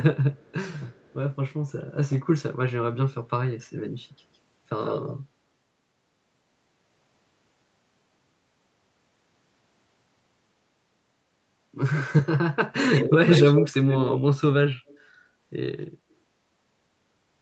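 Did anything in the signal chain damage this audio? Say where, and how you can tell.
Yes. Faint delayed copies of the speech trail it at 0.34–0.52 s and 0.9–1.14 s, lagging by 193 ms and very quiet. From 12.76–13.11 s and 13.27–13.7 s a 92 ms repeat arrives about as loud as the speech itself, then fades to a faint trace at 14.87–14.99 s. This is an echo leak in call processing, likely a loudspeaker end whose echo canceller let its microphone pickup return down the call, with the high end stopping near 8 kHz throughout.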